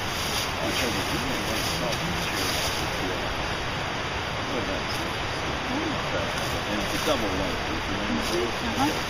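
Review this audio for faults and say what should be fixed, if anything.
No faults; nothing to fix.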